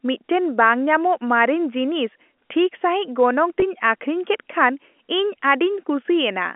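At 3.60 to 3.62 s, the speech briefly holds and turns slightly buzzy. This is packet loss with pitch repetition: about 20 ms of audio, which fits a single lost packet, went missing on the G.711 telephone line, and the receiver filled the gap by repeating the last pitch period.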